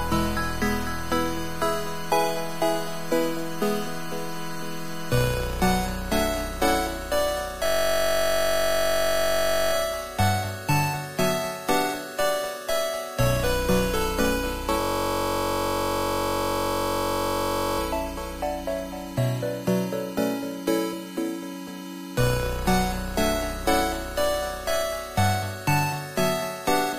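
From 7.66 to 9.73 s and again from 14.81 to 17.79 s, a system hang loop repeats one identical 21.33 ms slice, fitting a 1024-sample buffer, as a steady 46.9 Hz buzz; exact repetition distinguishes it from dropouts.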